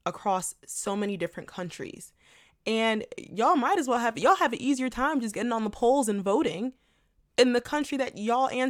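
Nothing in this speech recording stood out as a technical problem on listening.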